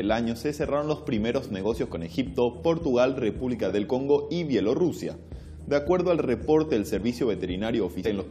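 A short piece of audio with one fault near its very end. At 8.05 s there is a brief glitch lasting under 20 ms. This is damaged data in a compressed stream. A small stretch of the encoded data was corrupted, so the decoder could not read those frames properly. It lost its place and had to search for the next valid frame header. That disruption is the glitch.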